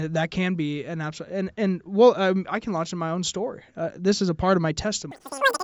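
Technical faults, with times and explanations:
5.11–5.63 s, wrong sample rate: right after "is a part of", the speech suddenly jumps to three times its normal speed and shoots up about 19 semitones, so it comes out as a squeaky, chipmunk-like chatter until the clip ends. That's the classic sign of samples being played back faster than they were captured, with no resampling in between. A threefold jump fits 16 kHz audio being played out at 48 kHz, so speed and pitch rise together by that same factor.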